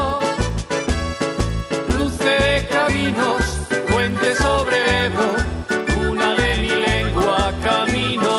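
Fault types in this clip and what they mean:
Resampler restarted on every block: the rate conversion, which points to 24 kHz being brought up to 48 kHz, was run fresh on each 100 ms block. At every block edge the converter had no real neighbouring samples to work from, so each boundary picks up a small error. You get a steady tick ten times a second, 10 Hz, running through the whole clip and riding on the sound rather than the gaps.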